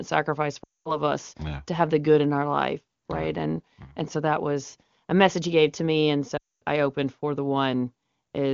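Lost AMR speech frames hit twice, at 0.64 to 1.01 s and 6.37 to 6.62 s: failed checksums made the decoder repeat the last good sound with falling gain, so it drops to near silence within two frames, then returns weak just before "us yeah to have" and "I opened for the".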